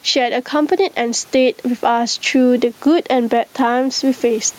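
Gain pumping runs through the whole speech clip: the room background, sitting about 39 dB under the voice, swells in the gaps and ducks around ten decibels on each loud syllable, likely from gain set too high feeding a fast limiter.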